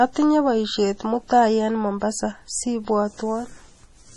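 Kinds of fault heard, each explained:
MP3 compression: The speech is likely MP3 encoded, with heavy damage that fits a low bitrate around 32 kbps. The encoder has cut the treble, leaving nothing above 11.3 kHz, and has discarded weak frequency content, giving a watery, swirling coarseness throughout.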